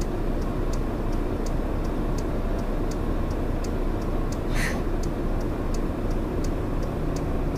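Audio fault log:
Throughout, low bit depth without dither: the audio has a grainy, gritty distortion that shifts with the sound and sits only about 35 dB below it, likely from truncating to around 7 bits with no dither, so the rounding error tracks the signal instead of forming a steady hiss. A waveform zoom shows visible stair-steps, and a spectrogram shows broadband hash that appears and vanishes with the signal.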